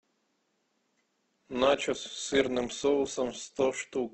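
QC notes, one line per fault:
1.38 s to end, adaptive stream at a lower bitrate: codec artefacts suddenly rise without a gap, which fits a switch to a much lower-bitrate Opus stream.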